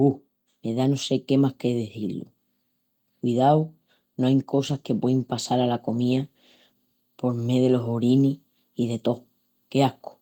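From 4.67 s to 7.03 s, between "no ain" and "por mé delos orinis", there is a call bitrate drop. The speech turns rough and watery for about 2.3 s, which fits the encoder rate falling from around 32 kbps to around 18 kbps after the call's bandwidth estimate fell. With fewer bits, the codec quantises the spectrum more coarsely, smearing detail until the rate recovers and the sound clears.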